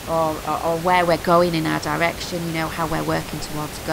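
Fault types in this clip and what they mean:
No system faults detected; the only background is ordinary room noise sitting about 12 dB below the speech.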